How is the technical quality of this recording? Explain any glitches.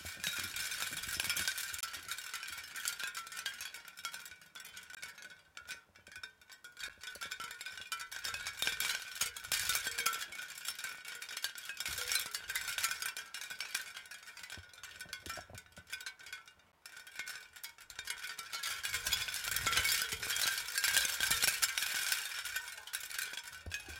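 The recording is marred by six dropouts. A block of digital silence occurs at 1.81–1.83 s (23 ms, fitting a 1024-sample buffer), 4.95–4.97 s (20 ms), 6.89 s (10 ms), 8.72 s (1.5 ms, fitting 64 samples), 16.72 s (12 ms, fitting 512 samples) and 19.54 s (3 ms). Each time, the output buffer likely went unfilled and zeros replaced the sound. The sound cuts out and back abruptly, so the shortest gaps sound like ticks and the longest like brief holes.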